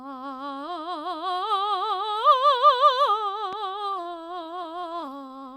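A loud pop at 3.53 to 3.55 s, a single sharp click roughly 5 dB above the music, most likely a voltage spike from a switch, plug or static discharge. Repeated stalls (stutter) run from 3.71 to 5.43 s: in about two dozen brief holds, the longest 24 ms and totalling about 0.3 s, late packets starved the buffer and the last sound was stretched. Nothing is lost, but the music drags and stutters.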